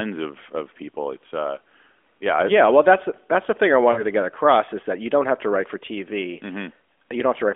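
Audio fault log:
3.92–4.03 s, lost AMR speech frames: roughly 40 ms of speech smears and dips as the decoder repeats prior parameters with falling gain, which fits two dropped 20 ms frames.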